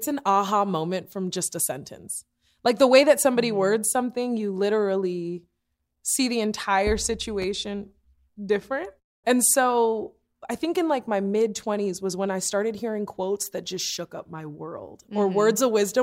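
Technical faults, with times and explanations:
7.42–7.46 s, loud pop: one sharp pop just after "literally see the entire", peaking a few decibels above the speech, which carries on underneath. The likely cause is a brief voltage step from a plug, switch or static, shaped by downstream circuitry into a short pulse.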